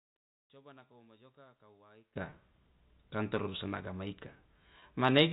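Speech over a telephone-band path, its top end stopping at 4 kHz in the manner of G.711 coding, and it opens mid-fault: an audio dropout to a faint residue is already under way at 0 s and holds until 2.16 s. Through that stretch the wanted signal is gone, leaving only a faint sound about 30 dB below normal level, and the speech then returns abruptly rather than fading in. This most likely points to a break upstream while the path after it stayed live. Two short packet losses with pitch repetition follow, at 2.30 s and 4.80 s. Each bridges a 20 ms gap, which fits a single lost packet, with the receiver repeating the last pitch period, so both register as a brief held, slightly buzzy tone.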